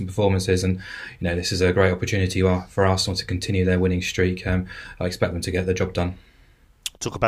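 Nothing in this speech recording stands out as a technical fault; there's no glitch, dropout or distortion to point to anywhere along the way.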